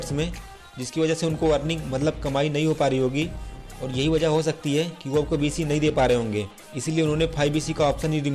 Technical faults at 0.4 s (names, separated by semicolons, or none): none